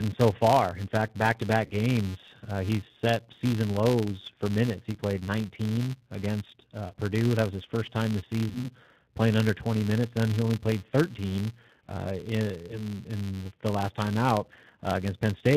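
Speech, coded throughout with the G.729 codec, with plainly audible damage. The voice is rebuilt from a vocal tract filter and pitch predictor, which fits about 8 kbit/s. Nothing above 4 kHz survives, so it sounds band-limited, rough and synthetic. A steady buzz at 188 Hz also runs through the whole clip. It comes from a filter restarted on every block. The filter starts each block from silence, leaving a small transient each time. The rate fits a 256-sample block, and the buzz follows the signal's level. There are also five spots of VoIP packet loss concealed by the speech codec. They fall at 1.65 to 1.73 s, just after "fact back to", and at 4.92 to 4.98 s and 6.88 to 6.94 s. Another comes at 8.49 to 8.70 s, between "his first time this" and "playing under". The last is at 12.67 to 12.83 s, just before "in the last time". About 60, 30, 30, 60 and 20 ms of audio were lost. The decoder fills each gap from its last pitch and filter with falling gain. 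The sound smears into a fading buzz or coloured noise and stays weak until the decoder recovers.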